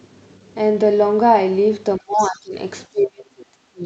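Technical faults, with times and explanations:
1.98 to 2.55 s, speech suppressed in double talk: the speech dips by as much as about 25 dB for roughly half a second. This is likely the echo canceller turning down both sides while they overlap.
2.16 to 2.4 s, other side's voice leaking through: a second, fainter voice about 20 dB below the talker is audible. Residual loudspeaker echo the canceller failed to remove is the likely cause.
2.92 to 3.85 s, speech suppressed in double talk: the speech drops again, by as much as about 30 dB, for roughly a second until the clip ends. The likely cause is the same overlap suppression.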